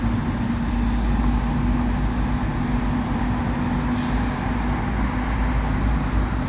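The recording of sounds has no technical faults, and its signal holds steady throughout with nothing to mark as a defect.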